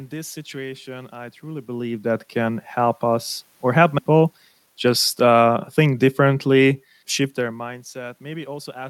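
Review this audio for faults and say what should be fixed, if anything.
At 3.98 to 4.00 s the speech has a skip ahead: around 0.4 s of audio is missing, and the sound on either side of the jump is joined directly with no fill. Later audio was already queued, so a run of delayed speech was discarded, either lost in transit or dropped when the jitter buffer overflowed. The jump also cuts the playout delay by roughly the same amount. To prevent it, size the jitter buffer for the network's actual burst delay, and reduce an excess gradually rather than discarding a block at once.

From 4.10 to 6.22 s there is a jitter buffer speed-up. Playback runs at 108% of normal speed at unchanged pitch, which makes this stretch sound hurried. The buffer was holding more audio than its target, most likely because delayed packets arrived together. The receiver trimmed short pitch-period segments repeatedly, removing roughly a fifth of a second in total. 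To prevent it, smooth delivery bursts upstream and spread delay reduction over a longer interval at a gentler rate.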